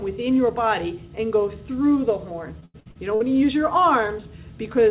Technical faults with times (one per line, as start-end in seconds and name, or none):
2.60-3.22 repeated packet loss (robotic sound)